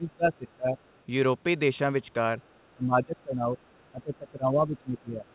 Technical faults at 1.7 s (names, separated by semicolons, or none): none